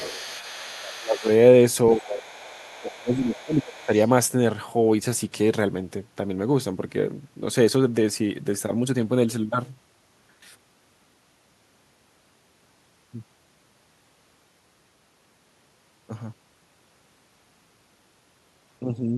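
From the start to 1.34 s, a second, fainter voice sits under the talker, about 20 dB down. This is the other side's voice leaking through, most likely far-end audio from the loudspeaker that the echo canceller failed to remove from the microphone. It returns from 1.89 to 2.95 s and from 3.35 to 3.86 s, each time about 25 dB below the speech. What sets it apart is that something is added: a separate, quieter talker runs alongside the main one, and the main voice itself is not thinned.

Around the times of that leak, the talker's own voice also drops out, which is speech suppressed in double talk. From 0.59 to 1.27 s, 1.94 to 2.29 s and 2.77 to 3.91 s, the voice dips by roughly 20 to 25 dB, losing level for spans of under a second to about a second. This is likely because both sides were talking at once, and the echo canceller, unable to separate the two, turned everything down. Here something is taken away: the main voice fades, rather than a second voice being added.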